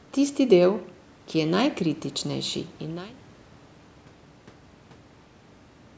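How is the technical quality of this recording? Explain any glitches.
The technical quality of this recording is sound, and there are no glitches to explain.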